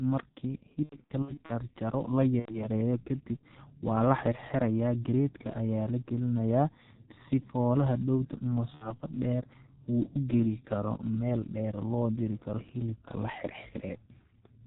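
Throughout, the speech has the heavy G.723.1 codec sound. Nothing passes above 4 kHz, so it is muffled and hoarse. Consonants blur, which fits a 6.3 kbit/s rate. At 0.83 to 1.52 s, 2.39 to 2.68 s and 8.75 to 8.94 s, VoIP packet loss concealed by the speech codec stretches the sound into a buzzy tone or coloured noise that fades. The first stretch comes in scattered gaps.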